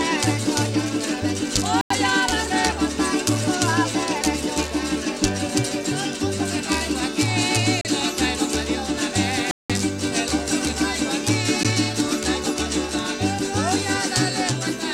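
At 1.81 to 1.90 s, 7.81 to 7.85 s, 9.51 to 9.70 s and 11.63 s, blocks of digital silence cut the sound abruptly, with no fade. The longest gaps fit 4096- and 8192-sample buffers left unfilled. Waveforms show flat lines, spectrograms blank columns bordered by broadband streaks.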